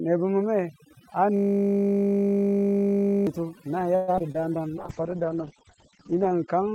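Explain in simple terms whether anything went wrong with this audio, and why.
Several things went wrong, and they stack up over the clip.

Overdone noise removal runs through the whole recording. A noise-cleaning tool was set far too strong, so it switched off any frequency band that looked like background hiss, and it took the quieter parts of the speech along with the noise. The background drops to an unnatural near-silence scattered with twinkling specks.

From 1.37 to 3.27 seconds there is a system hang loop. The computer or its sound driver froze, but the audio hardware kept replaying the same tiny slice of sound already sitting in its buffer. That slice is only 20 ms long, so it repeats 50 times a second for almost two seconds. Instead of speech you hear a steady, flat buzz, which fits a very short playback buffer stuck cycling.

Between 3.95 and 4.36 seconds comes repeated packet loss (robotic sound). 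Pieces of the call's data went missing or arrived too late, four times in quick succession, and the longest gap was about an eighth of a second. Each time, the receiver filled the hole by stretching out the last bit of sound it had. Roughly two-fifths of that short stretch is patched-in sound, so it comes out choppy, with bits of speech simply gone.

Right after, from 4.37 to 4.68 seconds, there is a jitter buffer slow-down. The receiver's small reserve of incoming audio was running low, or it had just decided to hold more in reserve, so it repeated tiny fragments of the sound to build it up. This adds about 50 ms and plays that moment at about 86% speed. The pitch stays the same, but the speech sounds drawn out.

From 4.78 seconds to the end there is a call bitrate drop. The connection judged that it had much less room, so the encoder was told to squeeze the audio far harder and to throw away the treble above about 8 kHz. 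It sits at its lowest quality for about 1.5 seconds. The end of the clip sounds muffled, rough and watery compared with the speech before it.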